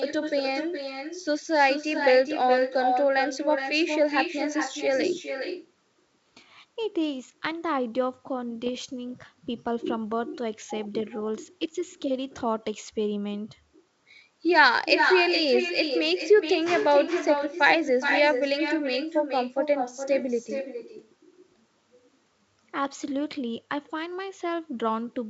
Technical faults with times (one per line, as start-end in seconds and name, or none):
0.00-25.30 echo with no canceller
8.66-8.69 bit errors on an ADPCM link